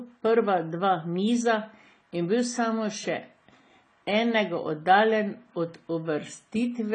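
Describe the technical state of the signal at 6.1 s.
At 6.1 s the speech carries the same damage heard across the whole clip, most likely AAC compression at a low bitrate, consistent with AAC-LC around 24 kbps. Nothing reaches above 9.9 kHz, so the top octave is simply missing and the sound is dull. With too few bits to go round, the encoder quantises frequency lines coarsely and drops weaker bands, which leaves plainly audible smearing and a warbling, fizzy texture on sibilants.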